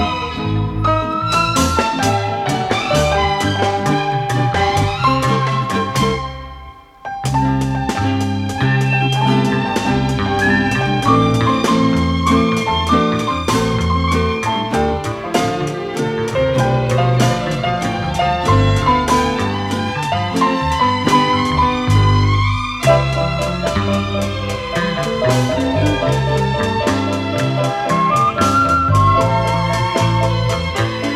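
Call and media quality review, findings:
No audible faults found in this recording.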